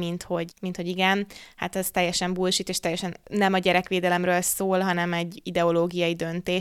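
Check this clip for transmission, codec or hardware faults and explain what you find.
Nothing turned up here, with no transmission, codec or hardware problems to report anywhere in the speech.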